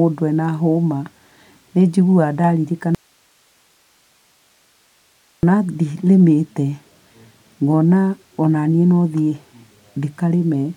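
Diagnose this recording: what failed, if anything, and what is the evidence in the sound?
An audio dropout to a faint residue runs from 2.95 to 5.43 s: the speech cuts off abruptly for about 2.5 s, leaving only hiss roughly 40 dB below normal level. The live noise floor points to a likely upstream connection or source loss.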